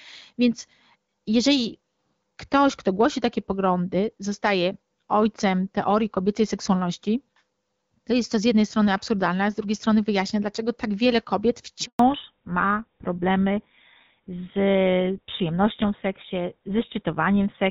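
At 11.85 s, right after "dlaczego tak wiele kobiet", the speech cuts to silence for 140 ms: a handover gap, where no speech frames arrived while the call switched networks. From 11.99 s to the end the voice turns duller and rougher with nothing above 4 kHz, a fallback to narrowband from HD Voice to a codec consistent with GSM full rate.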